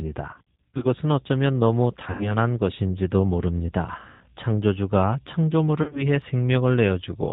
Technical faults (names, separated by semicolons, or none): G.729 codec; VoIP packet loss concealed by the speech codec